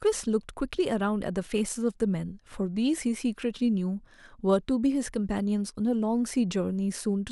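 Nothing in this bit of speech trips up at any point, so there's no technical fault to point to anywhere along its run.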